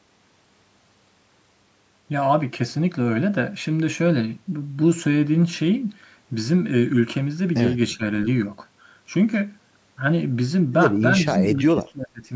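From 7.93 to 8.03 s the speech dips by about 15 dB, then from 11.54 to 12.24 s it drops in pieces by up to about 25 dB. This is likely speech suppressed in double talk, with the echo canceller mistaking the talker for loudspeaker echo. The waveform shows hollowed sections, and the spectrogram shows matching weakened bands.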